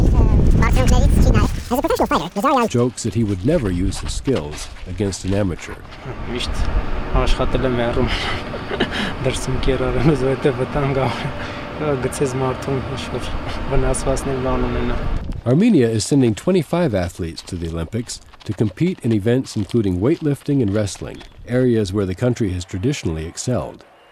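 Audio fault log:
0.00–2.68 s, section at the wrong speed: the opening runs at twice its recorded speed, so pitch rises roughly ten semitones and everything sounds hurried, likely from a mismatched playback clock.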